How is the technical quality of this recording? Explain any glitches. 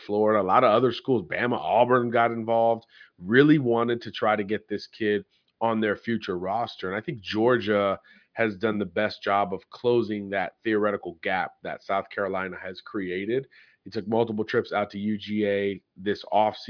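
No glitches can be heard anywhere in this speech recording. Nothing in it calls for a technical explanation.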